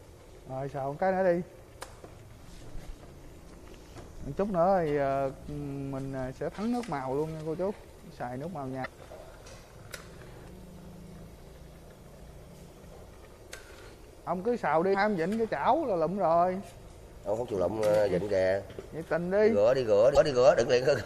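A watery, swirling quality runs through the whole clip, with the top end dull and cut off, faint detail fluttering in and out, and sharp onsets smeared. This is plainly audible MP3 compression, likely from encoding at a low bitrate, with the thinness fitting something around 64 kbps. With bits scarce, the encoder drops the treble and switches weak frequency components on and off from frame to frame, which creates the swirl.

Three brief blips interrupt the sound, at 8.82–8.87 s, 14.91–14.95 s and 20.13–20.17 s, each lasting roughly 45 ms. These are damaged data in a compressed stream. At each point the decoder receives corrupted bytes, misreads or discards the affected frames, and loses sync until it finds the next valid frame header. That produces the blips.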